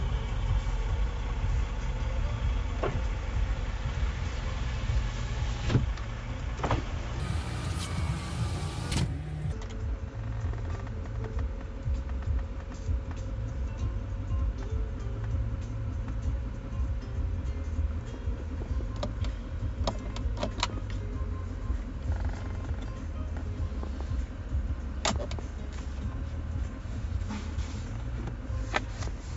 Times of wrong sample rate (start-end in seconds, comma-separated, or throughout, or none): 7.20-9.52